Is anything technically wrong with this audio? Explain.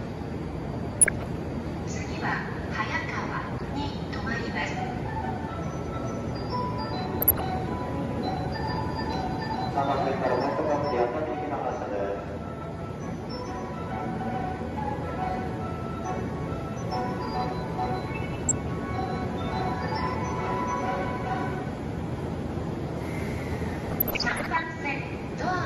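Yes. Two faults can be heard.

The whole clip sounds dull and granular, with a gurgling edge. The top of the spectrum comes and goes. This is likely MP2 compression at a low rate, around 80 kbps. Layer II divides the sound into 32 sub-bands and shares out bits among them. Short of bits, it mutes upper bands and quantises the rest coarsely. Bands flicker on and off as a result.

DAB burbling occurs at 0.94 to 1.23 s, 3.44 to 3.84 s, 7.21 to 7.55 s, 18.30 to 18.51 s and 23.91 to 24.63 s. The last burst is the longest and the worst. Bit errors from weak reception slip past error correction into the audio data. Corrupted samples put short blips of noise in single sub-bands, and corrupted scale factors make sub-bands jump in level for up to a frame. The error rate is well under one percent in most bursts and near one percent in the last.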